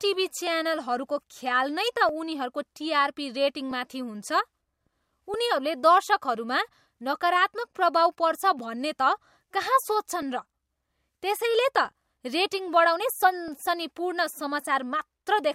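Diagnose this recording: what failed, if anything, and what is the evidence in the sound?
Clock drift buffer slips, 0.47 to 15.1 s: regular clicks every 1.63 s during the speech, likely from mismatched device clocks forcing the buffer to drop or repeat a few dozen samples.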